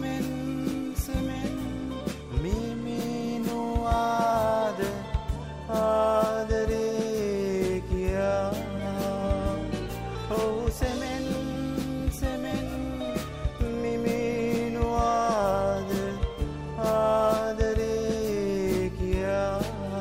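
From 9.42 s to the end of the clip, mains hum appears: a steady low 50 Hz tone, sitting roughly 20 dB below the sound. Power-line current has leaked into the signal path, through a ground loop or a nearby transformer, and it stays put once it starts. On a spectrogram it shows as a flat horizontal line at 50 Hz, with fainter low harmonics, beginning abruptly at 9.42 s. The waveform carries a constant low-frequency ripple under everything else.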